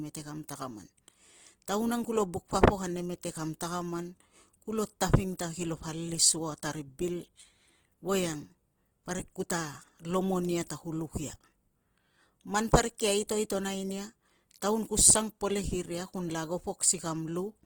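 The whole clip has a grainy, rough texture on the speech, plainly audible throughout, and the likely cause is Opus compression at a low rate, something that fits roughly 16 kbps. It sounds like the encoder stayed in its transform (CELT) mode, keeping each band's energy but filling starved bands with folded or noise-like content, so the tone turns noisy rather than swirly. The bandwidth never narrows; content runs up to about 20.1 kHz.

That same block-based coding produces pre-echo twice. At 5.37 s and again at 13.28 s, a sharp attack sits late in a transform block. The quantisation noise sized for the loud part smears back into the quiet moment before it, giving a brief hiss ahead of the onset, about 18 ms at the first spot and 15 ms at the second, with the attack itself sounding softened.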